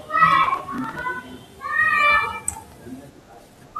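From 0.44 s to 1.02 s the speech carries a processor overload crackle. The processing could not keep pace with its small buffers, each around 10 ms, and missed roughly thirty deadlines in close succession. Each missed buffer was skipped, leaving a short hole with abrupt edges, and those stacked dropouts produce a gritty, tearing crackle over the sound. It clears at 1.02 s, once the load eases.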